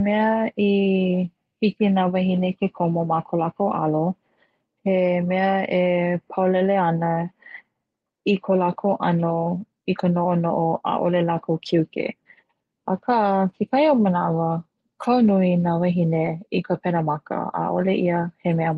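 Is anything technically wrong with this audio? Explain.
Yes. At 16.25 s there is a lost packet rebuilt from error correction: a brief rough, noisier patch, which fits a single lost 20 ms packet. The decoder filled it with the low-bitrate copy carried in the next packet, so no gap is heard. The clip reached us over a WebRTC call path using Opus, whose band limit is audible as a cut-off around 12 kHz.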